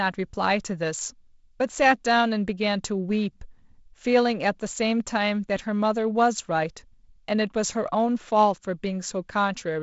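No faults in this speech clip, which is carried over G.722 wideband telephone coding at 48 kbit/s with nothing above about 7.7 kHz and only the light coding noise expected at that rate.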